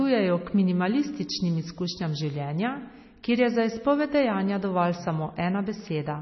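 From start to finish the speech sounds dull and watery, with a swirling, unstable texture and nothing at all above about 5.9 kHz, so the top of the spectrum is simply missing. This is heavy MP3 compression, likely at a very low bitrate, with damage that fits roughly 24 kbps. Short of bits, the encoder cut the treble at a fixed point and zeroed weak frequency lines, which flicker on and off between frames.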